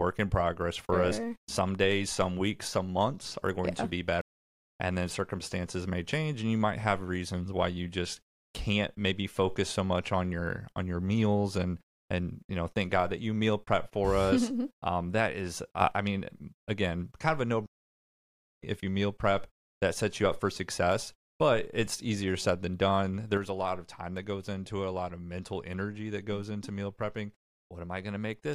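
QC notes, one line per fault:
4.21–4.61 s and 17.66–18.63 s, stream reconnect: the sound drops out after "going yeah to be" for 0.39 s and after "again kind of a" for 0.95 s, then resumes at "if you meal prep". It picks up about 0.4 s and then about 0.5 s further along, as a fresh decoder joining a live stream would.
15.81 s and 23.37 s, sudden gain jump: level and background noise step up together by about 7 dB for 0.1 s after "um that is", then drop by about 6 dB from 23.37 s to the end, likely an unramped digital gain change.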